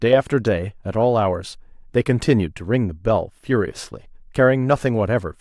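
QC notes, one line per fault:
No technical faults are present in the signal at any point in the clip.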